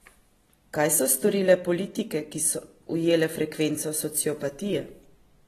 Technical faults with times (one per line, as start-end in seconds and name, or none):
0.00-5.47 AAC compression